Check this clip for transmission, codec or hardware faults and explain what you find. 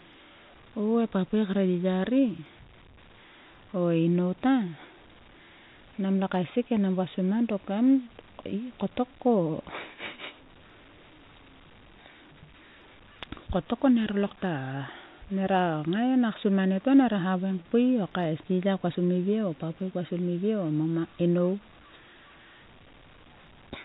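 No transmission, codec or hardware faults turn up in the clip.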